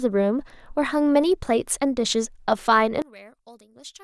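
Speech runs until 3.02 s. From there to the end, the centred voice collapses by about 24 dB, leaving a faint residue. The likely cause is one channel inverted, so the matching left and right signals cancel when summed to mono.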